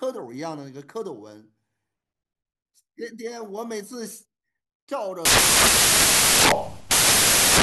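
From 5.25 s to the end, the speech turns into loud, harsh broadband noise: samples built from the wrong bytes. The reader misassembles each sample's bytes, so the rapidly changing low-order bits dominate the values.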